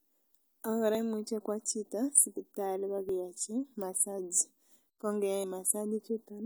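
Dropped buffers (overrun) at 0.95, 3.09 and 5.44 s in this speech recording: each marks a jump where roughly 10, 10 and 20 ms likely went unread and were overwritten.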